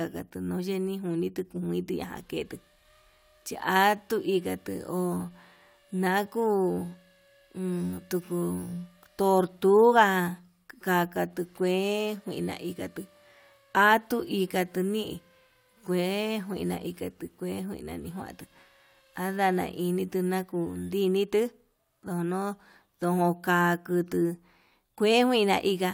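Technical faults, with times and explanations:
No technical faults can be heard in this speech recording. Nothing in the audio points to a problem anywhere in the clip.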